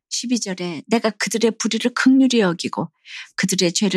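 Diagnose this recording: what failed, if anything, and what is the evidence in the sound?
From 0.53 s to 1.08 s the speech abruptly runs faster and sits higher, about 5.9% quicker and roughly a semitone (100 cents) sharp, then snaps straight back to its normal pace and pitch. Speed and pitch moving together in a single step and releasing just as suddenly marks a drift correction step at the driver or buffer stage. A clock-matching resampler likely jumped its playback rate to drain an overfilling buffer.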